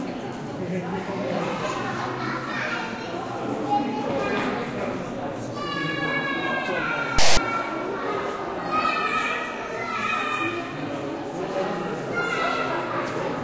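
From 7.19 to 7.37 s, about 0.19 s, a block of file tags is played as audio. Text bytes read as samples give a loud, lopsided rasp with hard edges, unlike the even, full-scale white noise of misread compressed data.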